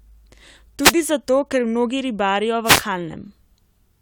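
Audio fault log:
0.81–0.93 s: wireless microphone noise hit. A short burst of static swishes over the speech just before "zato ker mnogi ribarijo". The radio link from an analogue FM microphone briefly faded as reflected signals cancelled. Receiver noise rose through the gap for about 0.13 s.
2.64–2.83 s: wireless microphone noise hit. It recurs right after "zato ker mnogi ribarijo", lasting about 0.19 s. Another fade let the hiss surge over the speech.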